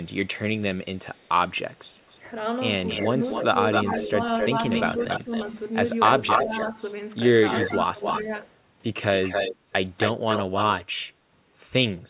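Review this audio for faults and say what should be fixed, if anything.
Echo leak, from 0.97 s to 10.76 s. A second copy of the speech trails the original by about 269 ms and sits only around 5 dB below it, through nearly the whole clip. The likely cause is a loudspeaker on the far side whose echo canceller failed to subtract what its microphone picked up, so that sound returned down the line. Because the sound is band-limited to below 4 kHz, consistent with a narrowband call codec such as G.711, the echo sounds as dull as the direct speech. To prevent it, use a headset on the loudspeaker side or retune its echo canceller so the echo path is fully modelled.

Speech suppressed in double talk, between 1.83 s and 5.32 s, between 6.44 s and 8.27 s, and from 10.18 s to 10.42 s. The speech dips in short pieces, totalling about half a second in the first stretch and under half a second in the second, with drops of around 10 dB. 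The last dip is brief but deeper, around 15 dB. These dips fall while the echoed sound overlaps the speech, and the likely cause is an echo canceller that could not separate the two and turned both down. To prevent it, improve double-talk detection so suppression applies only to the echo component.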